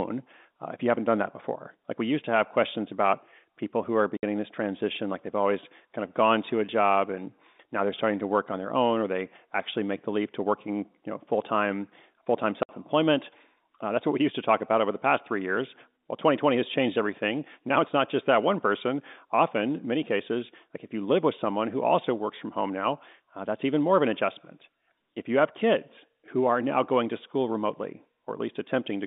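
Two short dropouts from packet loss filled with silence: at 4.17 to 4.23 s, between "about people who are" and "this transition like they've", and at 12.63 to 12.69 s, right after "full time full time". Each is a 60 ms hole, which fits two lost 30 ms packets. The holes have hard edges, heard over the narrow G.711 telephone band.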